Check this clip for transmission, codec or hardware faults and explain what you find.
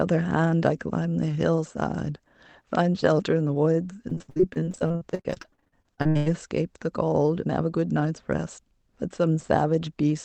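One transmission fault is audible: repeated packet loss with a robotic sound, from 4.09 to 6.28 s. Across that stretch the speech turns choppy and robotic. There are dozens of short holes, the longest about 89 ms, and close to half the span is filled in rather than actually heard. Packets kept going missing or arriving late. Each gap was patched by extending the last received sound, so real pieces drop out and synthetic continuations take their place. The speech comes through an Opus call path whose band stops at 8 kHz.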